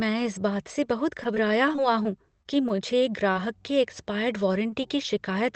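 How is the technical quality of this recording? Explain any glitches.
The recording has several packet-loss glitches typical of an internet call. The audio passed through a call codec, likely Opus at around 20 kbps, band-limited to about 8 kHz.

From 1.23 to 2.07 s there is repeated packet loss, giving a robotic sound. Five small gaps, none over 18 ms, are patched by extending the previous sound. The result is choppy.

Short concealed packet loss occurs at 2.43 to 2.47 s and again at 3.33 to 3.37 s. About 20 ms of audio never arrived each time. The receiver continued the last sound, so you hear a brief smear or wobble.

At 4.70 to 4.74 s there is a short stall from a late packet. The jitter buffer ran dry and the last sound was held about 18 ms longer. Nothing is lost, but a sound lingers briefly.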